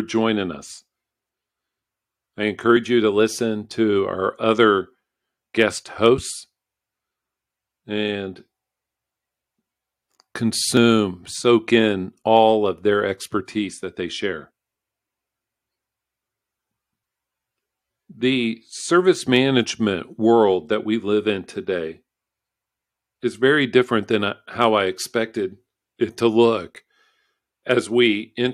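At 2.77 s, just before "you to listen to", two stream segments (apparently 4 s long) overlap in their time stamps, so the player trims real audio and the waveform jumps in a tiny skip. At 10.77 s the same overlap between stream segments returns as another brief skip. Hard clipping, where peaks exceed what a stage can pass and are cut flat, adds crackle on loud moments: at 5.61 s, 6.05 to 6.08 s, 12.35 to 12.39 s (just before "of their expertise that"), 19.35 to 19.38 s, 24.62 to 24.64 s (between "very different than uh" and "I expected it to") and 27.71 s, overdriven by about 0 to 2 dB.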